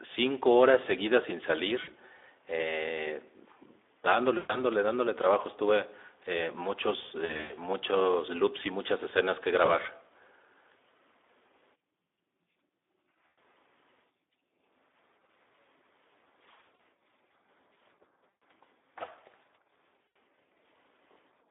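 Throughout the speech, the Speex codec leaves a hoarse, grainy excitation and a line band of roughly 300 Hz to 3.6 kHz with nothing above it. The damage is plainly audible and fits a low-quality setting near 11 kbps, where the CELP coder has too few bits to model the excitation cleanly.

VoIP packet loss concealed by the speech codec occurs at 1.83, 4.37, 7.25, 9.65, 13.28, 16.76, 18.31 and 20.08 s. At each, the decoder stretches the last pitch and filter into a buzzy tone or coloured noise that fades, and the voice recovers weakly afterward. Gaps range from about 20 ms at 9.65 s to 160 ms at 7.25 s, where the losses are scattered over 240 ms.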